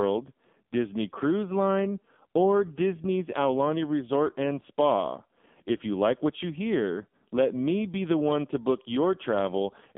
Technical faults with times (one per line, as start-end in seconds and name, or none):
0.00-9.97 AMR narrowband mobile codec